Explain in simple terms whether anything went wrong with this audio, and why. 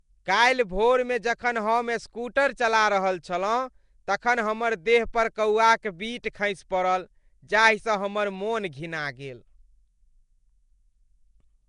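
Throughout, the speech sounds rough and underwater, with a hissy haze and nothing above 10.6 kHz, likely from Nellymoser compression, an old Flash codec that squeezes sound coarsely.

At 6.23 s, a brief hiss arrives just before a sharp sound, blurring its start. This is pre-echo, where compression noise leaks ahead of the attack by about 10 ms.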